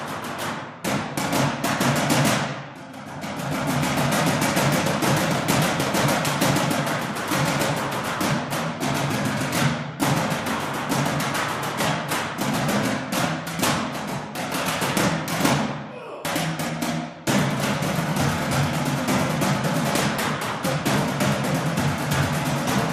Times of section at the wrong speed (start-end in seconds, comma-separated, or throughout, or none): none